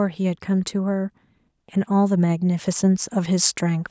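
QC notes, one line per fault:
1.86–3.91 s, automatic gain rising. From 1.86 s to the end, the level climbs steadily by about 5 dB. The speech and the background swell together, so the change is not in the delivery. An automatic gain control judged the input too quiet and eased its gain upward over roughly two seconds. The call's microphone processing keeps the top of the band at 8 kHz throughout, and that ceiling stays fixed while the level grows.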